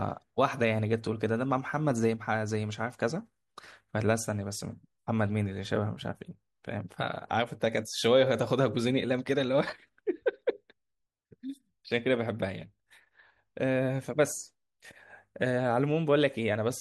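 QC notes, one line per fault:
No fault found in this clip.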